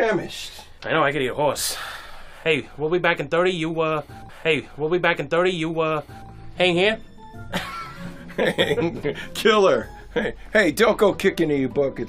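At 4.29 s the audio jumps back with a small blip and replays about 2.0 s of material until 6.28 s: a stream segment repeated, fetched or queued twice by the player.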